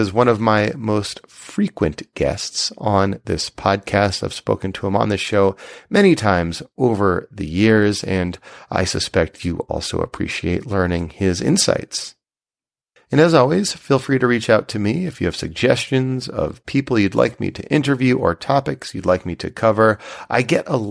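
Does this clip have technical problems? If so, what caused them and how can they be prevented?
No, there are no technical problems to report.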